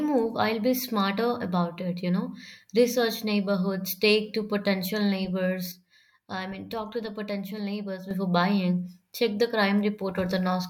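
A digital gain change, likely applied from one sample to the next with no ramp, produces a sudden gain jump in this speech recording: from 5.72 s to 8.11 s the speech and background noise drop together by about 7 dB, then abruptly return.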